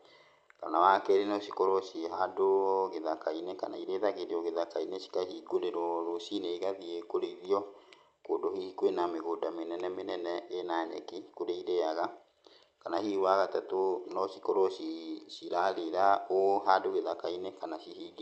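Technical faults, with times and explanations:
The speech carries no technical faults, and the call path it passed through is audible only as the usual coding character of Opus with the top end stopping at around 8 kHz.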